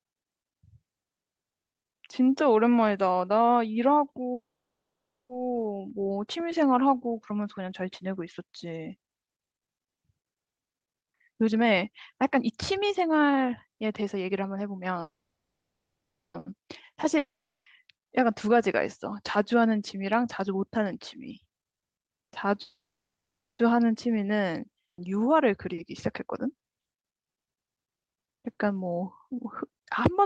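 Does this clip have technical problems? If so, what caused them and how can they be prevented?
Yes. A call audio freeze occurs at 4.33–5.32 s, 15.01–16.37 s and 22.62–23.62 s, likely from delayed packets emptying the jitter buffer. Each gap is mostly silent, and the sound then resumes where it stopped.

Jitter buffer speed-up runs at 10.69–14.94 s (about 123% speed, roughly a second trimmed), 18.47–22.47 s (108%) and 25.73–26.55 s (105%). Pitch-period slices are cut to shed the built-up delay, so the speech sounds hurried.

A long network dropout at 17.18–17.69 s is likely a stretch where no audio arrived. A fading fill gives way to near silence, and about half a second is never heard.

A burst of packet loss at 24.85–25.01 s produces a brief concealed fade. Speech then resumes further on, with roughly 0.7 s skipped.

A steadier network path with less congestion and jitter, together with a somewhat deeper jitter buffer, would prevent these stalls, losses and catch-up speed-ups.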